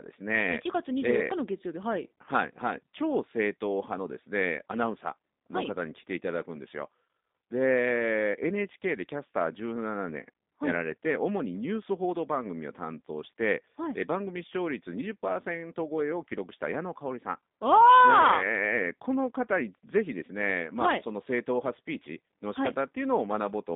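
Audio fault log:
throughout G.729 codec: speech sounds rough and slightly synthetic, fitting an 8 kbit/s low-rate coder rebuilding each frame from a filter, pitch predictor and few pulses. A spectrogram shows energy confined to about 200 Hz–3.7 kHz, with smeared, blocky harmonics.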